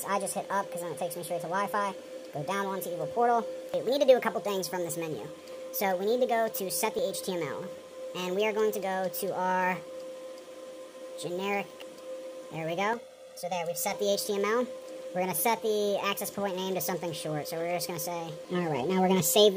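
Channel delay (comb filtering), 12.93–13.93 s: one channel lags about 1.5 ms. Summed to mono, it notches evenly spaced frequencies from around 300 Hz, sounding hollow.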